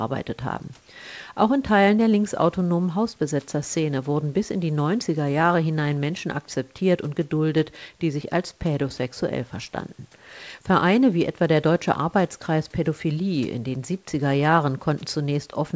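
Nothing's technically wrong with this speech clip: it's carried through ordinary call processing, with the top of the sound stopping around 8 kHz as that path normally leaves it.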